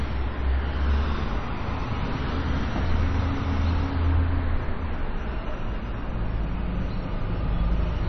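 From start to finish the audio sounds dull and watery, with nothing above 6 kHz and a plainly audible swirling texture where weak detail flickers in and out. This is likely MP3 compression at a starved bitrate, consistent with roughly 32 kbps. Short of bits, the encoder cuts the treble at a fixed frequency and drops quiet frequency lines, which switch on and off from frame to frame and make the sound warble and smear.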